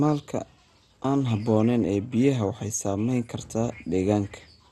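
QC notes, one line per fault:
Throughout: MP2 compression. The speech is dull, with a gurgling, grainy texture and nothing above 12.1 kHz. This is most likely MPEG Layer II at a starved rate, consistent with about 64 kbps: upper sub-bands are switched off and the remaining bands are coarsely quantised, so their levels flicker. A plain low-pass filter would sound dull but clean; the granular, fluttering distortion in the bands that remain shows this comes from the codec.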